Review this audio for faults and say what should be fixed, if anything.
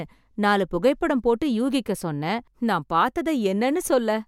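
Nothing to fix; no audible faults anywhere in the speech recording.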